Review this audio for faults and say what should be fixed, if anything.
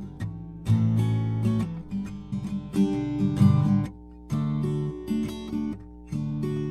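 A steady low drone at 60 Hz sits under the music for the whole clip, roughly 20 dB below it. That is mains hum: a ground loop or a nearby transformer is coupling the power line into the signal path. To prevent it, break the ground loop with balanced connections or isolation and keep cabling away from transformers.

At 2.31 s the music briefly jumps forward with a short smeared blip rather than a hard click. That is compressed frames skipped: around 70 ms of audio never played, which fits about three lost frames of roughly 26 ms each. The overlap between neighbouring frames softens the join. To prevent it, re-encode or re-transfer the file from an intact source and verify its integrity.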